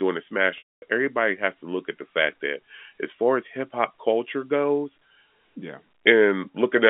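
From 0.58 to 0.82 s, a packet loss with pitch repetition leaves a 240 ms gap, consistent with a run of 20 ms packets. The last pitch period is looped briefly as a buzzy hold and fades to silence. The audio then cross-fades back in before "everybody has to look". On the waveform this shows as a short train of identical cycles tapering to a flat line. The spectrogram shows frozen harmonic stripes fading into a blank column within the 3.5 kHz telephone band.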